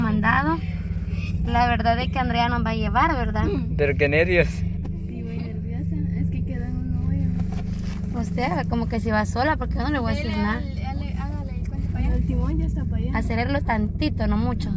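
No technical fault can be heard anywhere in this audio. Nothing in it breaks, drops out or shifts in a way that would point to a problem in the recording or playback chain.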